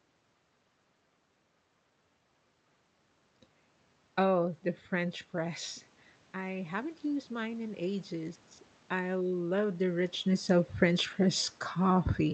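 From about 6.32 to 8.46 s you can hear the automatic gain rising. After the talker drifts back from the mic around the 5-second mark, the level at the input drops by about 10 dB, and the gain control responds by slowly turning itself up, by about 6 dB over roughly two seconds. The voice and the room noise swell together, so the background creeps up right along with the speech, all of it heard through the call's Opus coding with its 8 kHz cut-off.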